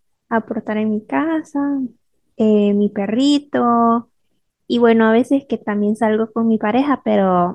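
Listening to the speech recording, nothing technical stood out at any point.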